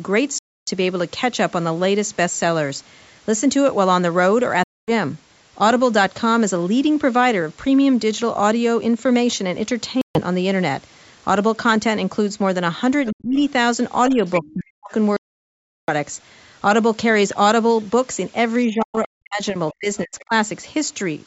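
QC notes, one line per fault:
0.38–0.70 s, 4.64–4.91 s, 10.01–10.20 s, 15.17–15.90 s, Bluetooth dropout: the speech falls to silence four times, for 0.29 s, 0.24 s, 0.14 s and 0.72 s. The likely cause is audio packets arriving at the headphones too late and being discarded. Nothing plays until good packets arrive again. The speech then resumes further along, as though it had continued underneath, so the missing stretch is simply gone rather than delayed.
13.06–13.12 s, 14.27–14.40 s, 20.19–20.25 s, other side's voice leaking through: short scraps of a second voice appear under the talker, at about 25 dB, 10 dB and 30 dB below the main speech. The likely cause is the far end playing over the talker's loudspeaker and the echo canceller leaving part of it in the microphone signal. The 14.27 s fragment is the strongest. The other two are faint traces.
13.12–13.38 s, 14.09–14.21 s, 14.41–14.91 s, 18.68–20.33 s, speech suppressed in double talk: the talker's voice ducks while the other side is speaking. 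The drop is shallow at 14.09 s, about 5 dB, and nearly total in the other three, about 35 to 40 dB, leaving holes. The last episode affects about a second spread across that range. The likely cause is the echo canceller failing to separate the talker from the loudspeaker echo and attenuating both. Within the affected range lies the leaked fragment at 20.19 s, which is not itself turned down.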